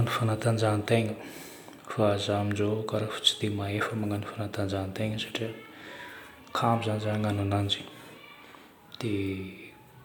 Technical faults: none

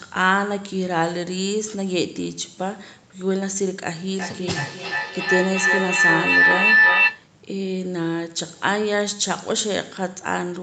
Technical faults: feedback howl

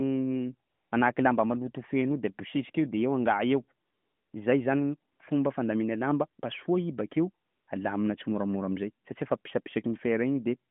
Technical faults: AMR comfort noise

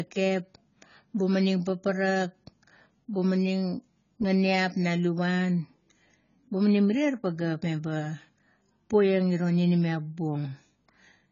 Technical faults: AAC compression

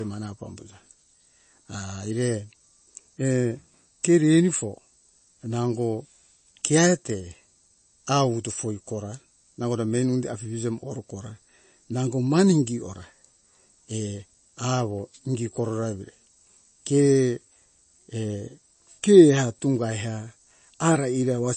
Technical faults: MP3 compression

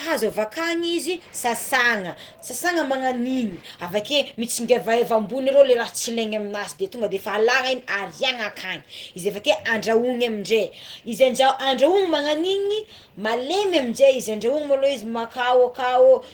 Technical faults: Opus compression

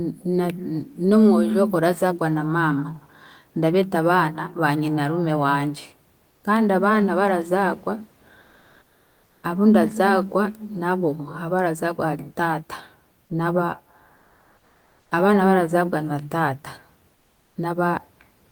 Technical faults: comfort noise in place of the background

